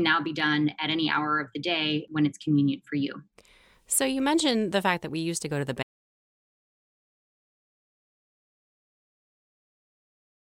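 At 5.83 s the speech cuts out into an audio dropout to silence lasting to the end, likely a lost input; the waveform flatlines and the spectrogram goes blank, with no room tone.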